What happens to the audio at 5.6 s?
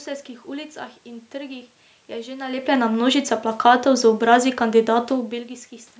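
Nothing goes wrong at 5.6 s: the speech carries on intact through that moment, with only the ordinary room noise behind it and the usual call microphone processing, which holds nothing above 8 kHz.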